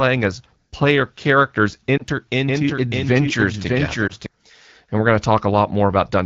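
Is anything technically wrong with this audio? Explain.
Yes, there are two kinds of fault.

At 1.98 to 2.03 s, just after "as player characters", and again at 4.08 to 4.12 s, the sound briefly dips and warbles. These are lost AMR speech frames. In each case a single 20 ms frame failed its checksum, so the decoder filled the gap by repeating the previous pitch and vocal tract settings at reduced gain.

From 2.48 to 4.26 s a second copy of the audio runs roughly 0.7 s behind the original and about 5 dB quieter. It has no room colour and begins and ends abruptly. This is a doubled audio track, likely from a second, slower capture path mixed back in alongside the first.

The wideband HD Voice coding under all of this is clear, which fits AMR-WB at around 12.65 kbit/s.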